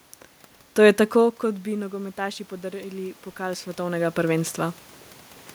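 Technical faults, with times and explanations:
1.4 to 4.59 s: automatic gain rising. The voice arrived about 15 dB quieter after the talker moved back around 1 second. The gain control answered slowly, adding about 6 dB. Voice and room noise swell together over about three seconds.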